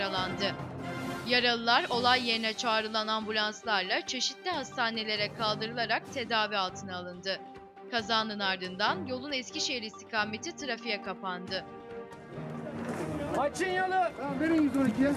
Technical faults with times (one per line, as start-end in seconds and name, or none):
none